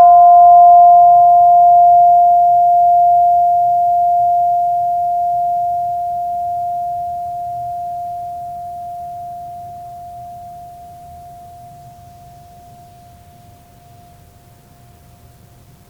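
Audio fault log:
No audible faults in this music clip.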